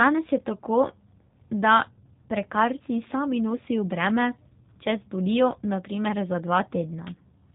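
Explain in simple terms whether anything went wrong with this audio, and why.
Something did go wrong: the speech was squeezed through the G.729 codec, a phone-call compressor that rebuilds speech from a simple model rather than sending the real waveform. For the whole clip nothing above 3.8 kHz survives, so it sounds muffled, rough and synthetic.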